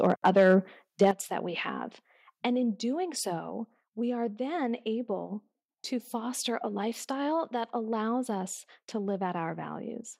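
Microphone overload from 0.04 to 0.56 s and again from 1.01 to 1.1 s gives the loudest peaks a harsh, crackling edge, running about 4 dB and 3 dB past the converter's limit. The likely cause is input gain set too high, so the converter flattens the waveform tops. At 1.11 s, just before "that we have", the microphone volume steps down. Sound and background drop abruptly by about 8 dB, likely because the call software cut the device input level after the clipped peak.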